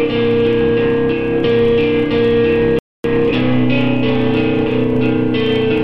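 At 2.79 s the player ran out of downloaded audio and had to wait for more to arrive, a rebuffering stall. The sound cuts abruptly to silence until 3.04 s, then picks up exactly where it stopped. Nothing is skipped, but about 254 ms of dead air is added.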